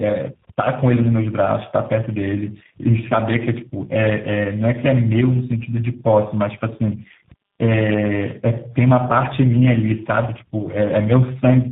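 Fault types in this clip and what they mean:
tandem speech coding: the speech passed through three speech codecs in a row, consistent with G.726, GSM full rate and G.729A, each adding to the last one's damage, so it sounds rough, muffled and warbly throughout. A spectrogram shows nothing above 3.8 kHz and smeared, flickering harmonics.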